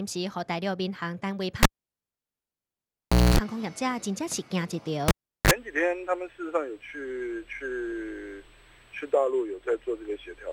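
At 1.63 s the cable is pulled and plugged in: a pop, 1.7 s of near silence, then 243 ms of 60 Hz buzz while only the tip connects, and a pop at 3.38 s. A spectrogram shows vertical clicks around an empty gap, with stacked mains harmonics just before the return. It recurs at 5.08–5.51 s, with a 0.38 s gap and 37 ms of 50 Hz buzz.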